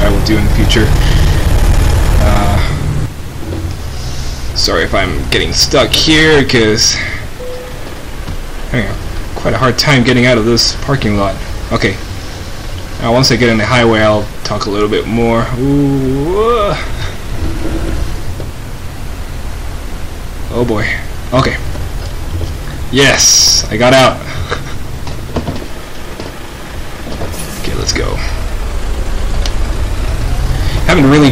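Hard clipping runs throughout: the audio is driven about 15 dB past full scale, so a few percent of samples flatten into squared tops, adding harsh fuzz and bright vertical harmonic smears.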